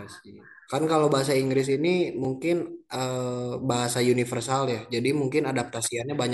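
At 2.25 s a brief tick or dip cuts into the speech, a block of digital silence only about 2.9 ms long. The output buffer was not filled in time, so zeros replaced the samples, which fits a 128-sample buffer, and the sound cuts out and back with no fade.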